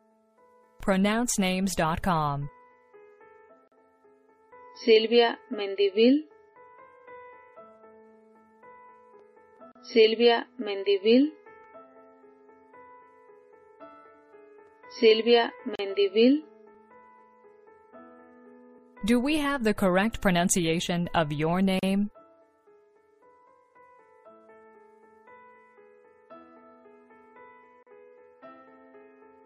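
At 3.68, 9.72, 15.75, 21.79 and 27.83 seconds the audio drops out briefly, a gap at a join of encoded pieces, repeating every 6 seconds. The first gap is about 40 ms and the rest about 37 ms. The pieces were each encoded on their own and butted together untrimmed, so every join keeps the encoder's start-up silence plus the padded last frame. You hear a short hole, edges softened by the codec, then the sound resumes exactly where it left off.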